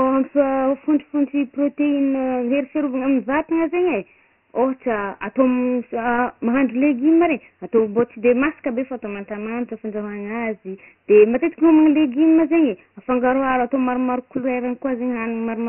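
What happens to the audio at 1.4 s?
At 1.4 s you're hearing Dialogic VOX ADPCM, present throughout: coarse 4-bit coding fitting a 24 kbps, 6,000-sample rate leaves nothing above 3 kHz and a gritty hiss trailing the speech.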